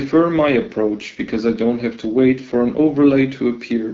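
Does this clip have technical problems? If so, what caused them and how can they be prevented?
Yes. From 0.42 s to 3.35 s an AMR rate drop makes the speech rougher and more synthetic, which fits the AMR-WB codec being switched from 12.65 to 8.85 kbit/s on a weak radio link. The wideband sound stays and nothing drops out, which distinguishes it from packet loss or a fallback to narrowband. Better coverage, or an AMR-WB rate floor at 12.65 kbit/s, would prevent it.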